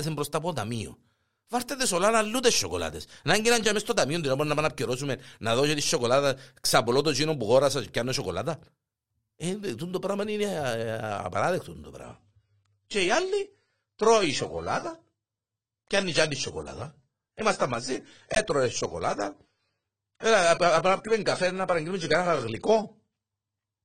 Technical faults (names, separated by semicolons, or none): adaptive stream at a lower bitrate